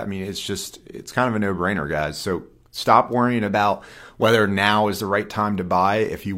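From 3.47 to 4.15 s, right after "stop worrying", there is a drift correction step. Speech runs 5.5% fast and about 93 cents sharp. It snaps back before "whether now is the", likely from clock-matching software adjusting playback rate.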